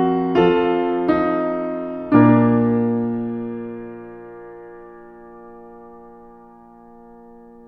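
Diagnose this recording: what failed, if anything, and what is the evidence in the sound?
Listening to the music closely, nothing stood out as a failure at any stage of the chain.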